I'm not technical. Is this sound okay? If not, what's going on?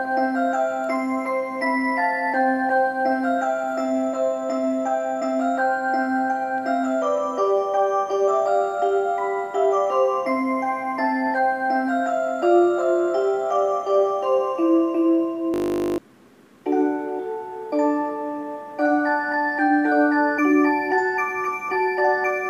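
No. From 15.54 to 15.98 s there is a system hang loop: the computer briefly froze while the sound hardware replayed one 20 ms slice about 22 times. That makes a steady 50 Hz buzz, not silence or a choppy stutter, and nearly half a second of real audio is lost.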